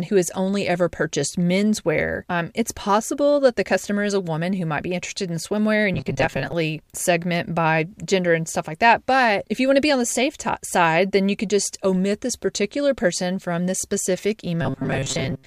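From 5.94 to 6.53 s, and again from 14.62 s to the end, the speech turns into a rigid metallic buzz fixed near 134 Hz: robotic sound from repeated short buffers. This likely comes from audio arriving too seldom, with a roughly 7.5 ms slice looped to fill the gap. About half the first stretch and most of the second is repeated material. Unlike a pitch-shift fault, the tone stays locked while the rough word shapes continue.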